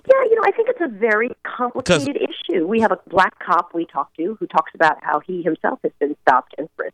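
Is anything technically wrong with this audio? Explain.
Yes. Lost LE Audio frames occur twice, from 1.31 to 1.33 s and at 3.16 s. The wireless link dropped about 20 ms of audio and then about 10 ms, which fits two 10 ms frames and then one. The LC3 decoder filled each gap by repeating the last good spectrum with its phases scrambled. The sound briefly turns into a noisy, hissy smear. Both gaps are too short for the concealment to fade toward silence.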